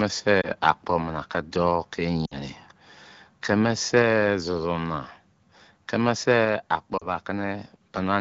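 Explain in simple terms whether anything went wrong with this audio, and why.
Three short glitches come from lost AMR speech frames: at 0.42 to 0.50 s, 2.25 to 2.43 s, and 6.97 to 7.07 s. Radio errors corrupted tiny slices of the call, so the phone's decoder covered each gap by repeating the last good sound while fading it down. The first is a quick dip, and the middle one is longest, so the speech quickly drops to near silence before recovering. The wideband HD Voice sound stays clear around them.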